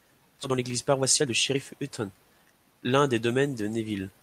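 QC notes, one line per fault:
0.43–0.45 s, skip ahead: playback leaps forward, dropping roughly a second of speech with no fill inserted, so the audio on either side of the jump is butted together almost directly. This is the jitter buffer discarding a backlog of audio that had piled up, most likely after it overflowed, cutting the delay by about a second in one step. The result is an abrupt splice where part of the speech simply never arrives.
0.49–3.00 s, jitter buffer speed-up: straight after the skip the speech runs at about 119% of normal speed while keeping its pitch, so it sounds hurried rather than chipmunk-like. The buffer was still holding more audio than its target and trimmed it by repeatedly cutting out short slices of one or a few pitch periods. Across this stretch roughly half a second is removed in total, compressing syllables and pauses.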